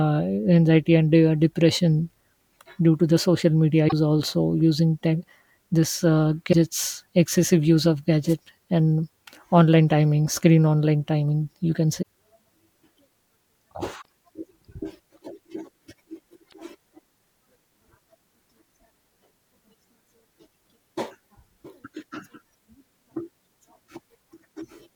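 At 3.85 to 3.93 s, between "to the social media" and "also using tech this", the speech breaks up briefly: damaged data in the compressed stream. Corrupted bytes leave the decoder unable to read those frames, so it loses sync and hunts for the next valid header, producing a garbled blip instead of the audio. The same fault returns at 6.49 to 6.54 s, just after "using tech this uh", for about 50 ms.

At 8.28 to 8.35 s, a short swish of static cuts across the speech for roughly 70 ms. This is a wireless microphone noise hit. The FM radio signal faded as reflected paths cancelled at the receiver, so receiver noise rose up through the audio for that moment.

Damaged-data blips then recur at 12.01 to 12.06 s, just after "online timing you can", at 13.98 to 14.06 s and at 16.45 to 16.53 s. Each lasts roughly 45 to 75 ms and is the same fault as the earlier ones.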